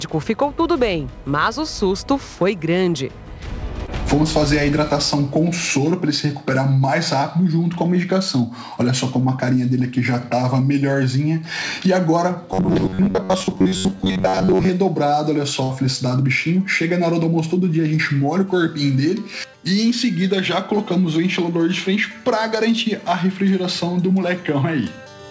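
A brief smear, with a wobble, passes between 3.86 and 3.90 s. This is short concealed packet loss: about 20 ms of audio arrived too late to decode, and the receiver filled roughly 16 ms by extending the preceding sound before blending back in.

From 12.53 to 14.72 s the sound turns rigid and metallic, locked onto a buzz near 94 Hz while still loosely tracking the material underneath. This is robotic sound from repeated short buffers. The likely cause is that audio arrived too sparsely, so fragments of about 10.6 ms were replayed in place of roughly half the real signal. That fragment length is one over the buzz frequency.

At 15.64 to 15.72 s a held buzz or fading hiss briefly replaces the audio, which then resumes slightly further on. This burst of packet loss removed about 60 ms, and the gap was covered by continuing and attenuating the last sound. The G.722 call path caps everything at about 7 kHz.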